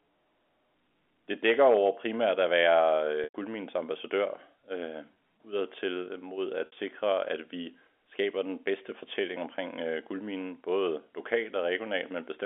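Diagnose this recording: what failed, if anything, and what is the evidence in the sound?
Network packet loss, bridged by pitch repetition: the receiver looped the last pitch period through each gap. After "over primært at være", 3.24 to 3.34 s turns buzzy and fades; 5.14 s briefly holds; after "mod at", 6.66 to 6.72 s smears before "at vi skaber den".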